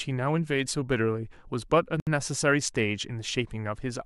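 A speech recording with a gap at a join of encoded pieces: from 2.0 to 2.07 s the sound drops into a gap of about 68 ms with smeared edges, then resumes where it stopped. Two separately encoded segments were joined untrimmed, leaving encoder delay and final-frame padding in place.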